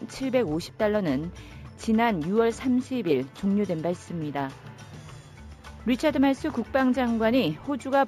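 Imaging from linear upsampling runs throughout. The top is dulled, and a faint mirrored copy sits between 8 and 16 kHz, which fits a 16 kHz source. It gives a light metallic shimmer.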